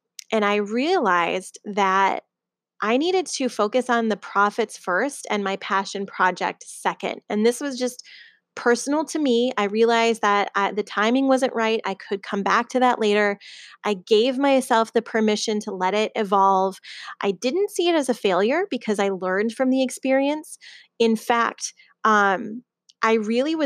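No technical faults can be heard anywhere in this speech recording. Nothing in the audio points to a problem with how it was captured, processed or delivered.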